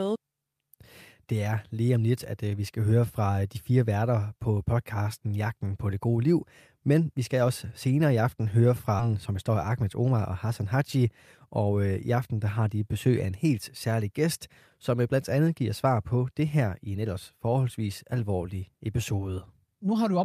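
At 8.99 to 9.01 s, just after "senere i aften høre", the receiver discarded a stretch of audio while later packets were already queued, most likely through a jitter buffer overflow. This is a skip ahead: roughly 0.7 s of speech never plays, nothing fills the hole, and the sound on either side is butted together almost seamlessly. The speech lurches forward abruptly, with a fragment simply gone rather than any silence marking it.

From 9.09 to 10.76 s comes a jitter buffer speed-up. The buffer was still holding more audio than its target, so the receiver repeatedly cut out small pieces one or a few pitch periods long, trimming around 150 ms in total to bring the delay back down. The speech runs at about 108% of normal speed while its pitch stays the same, so this passage sounds slightly rushed and compressed in timing.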